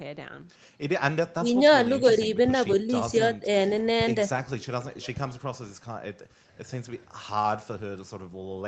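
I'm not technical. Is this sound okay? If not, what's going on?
No. Twice the call's echo canceller likely mistook the two sides talking at once for echo and turned the speech down, so the speech suppressed in double talk shows up as brief dips, sharply quieter, from 1.37 to 1.5 seconds and from 5.5 to 5.54 seconds.

From 4.82 to 5.41 seconds there is an echo leak. The far end was likely on a loudspeaker, and its echo canceller didn't fully remove what its microphone picked up. A faint copy of the speech comes back about a quarter of a second late.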